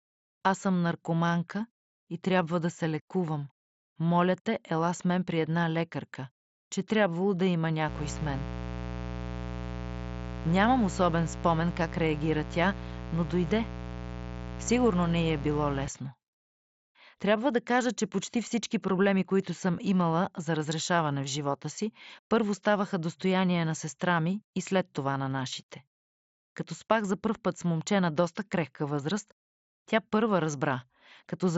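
From 7.88 to 15.88 s, right after "че трябвало да има", a raspy mains buzz sits roughly 10 dB below the speech: 60 Hz switching spikes whose harmonics spread upward.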